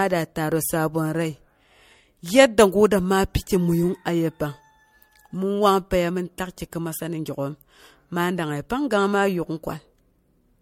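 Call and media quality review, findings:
Generation loss, whole clip. Speech swirly and hollow, consonant attacks smeared, nothing above 16.7 kHz. Likely MP3 re-encoded a few times, each pass requantising on a shifted frame grid so artefacts stack. Sounds worse than 64 kbit/s MP3 alone would explain.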